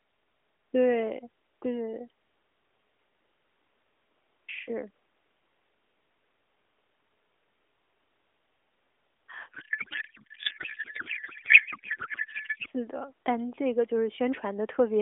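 From 9.52 s to 12.67 s the speech turns into garbled noise and warble that barely tracks it: a codec payload misread. Octet-aligned AMR frames are being read as bandwidth-efficient, so every field shifts. Packet loss would cause gaps or repeats; this is unbroken garbage. The surrounding narrowband AMR sound, which fits 12.2 kbps, is lightly coloured.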